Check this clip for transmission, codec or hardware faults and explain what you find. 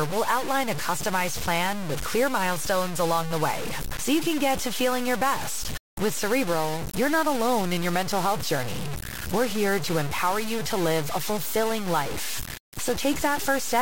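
One fault runs through the whole recording. Across the entire speech, a coarse grainy distortion tracks the signal, with quiet passages sputtering or dropping out and the error sitting only about 10 dB below the speech. The likely cause is low bit depth without dither, with samples truncated rather than rounded, which fits roughly a 4-bit quantiser.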